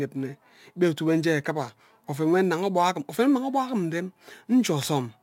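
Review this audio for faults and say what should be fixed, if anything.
Throughout the clip, the speech was resampled by repeating the nearest sample with no filtering, which fits a 44.1 kHz to 48 kHz change. This crude rate conversion leaves a patterned error roughly 30 dB down, heard as gritty, inharmonic fizz following loud and high sounds. Use a proper band-limited resampler instead.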